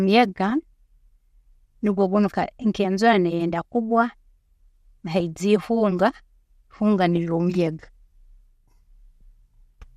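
DAB burbling breaks into the speech at 0.50, 5.20 and 7.17 s. Residual bit errors of around a tenth of a percent slip past error correction and corrupt MP2 samples. Individual sub-bands get short blips of noise, giving a few brief watery blips.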